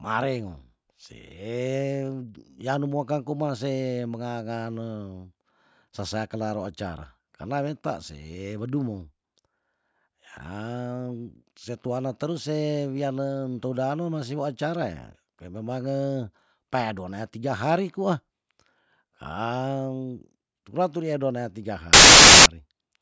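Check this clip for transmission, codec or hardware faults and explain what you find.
One fault is present in this speech clip. From 21.93 to 22.46 s, a hard-edged burst of very loud white noise: file tags played as audio, where compressed cover-picture data is read as samples.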